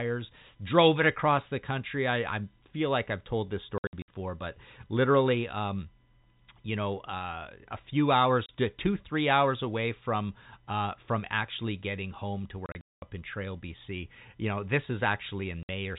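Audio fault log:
3.78–15.69 s, packet loss filled with silence: hard-edged holes, scattered over 3.78–4.08 s after "like I've told this", a single 30 ms gap at 8.46 s after "know uh a few", 12.66–13.02 s after "actually getting home to" (longest run 210 ms), and 15.63–15.69 s. The gaps come in 30 ms steps, which fits 30 ms packets that went missing and were replaced with silence.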